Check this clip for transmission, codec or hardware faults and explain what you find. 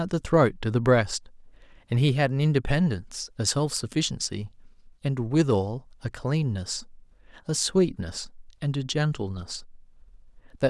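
No faults detected.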